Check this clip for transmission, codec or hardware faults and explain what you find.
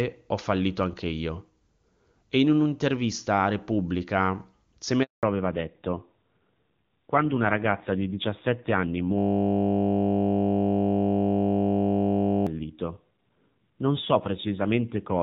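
Three faults are audible in the speech: a handover gap, a fallback to narrowband, and a system hang loop.

At 5.03 s there is a handover gap lasting 200 ms, until 5.23 s. The call switched networks, and no speech frames arrived during the switch. The voice drops out quickly and stays silent. Whatever was said in that moment is lost.

From 5.23 s to the end, the call falls back to narrowband. The HD Voice sound before the gap fits AMR-WB at 23.85 kbit/s. After the gap the sound points to AMR-NB at about 7.4 kbit/s. Nothing remains above 4 kHz. The voice turns duller and rougher.

From 9.19 s to 12.47 s a system hang loop takes over. The system froze while the audio hardware kept replaying its buffer. A 20 ms slice repeats exactly, 50 times a second, for over three seconds. It sounds like a steady 50 Hz buzz.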